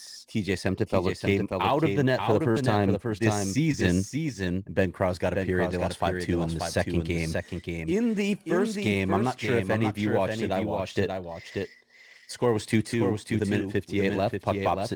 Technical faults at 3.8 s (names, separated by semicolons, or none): doubled audio track; sample clock jitter; short concealed packet loss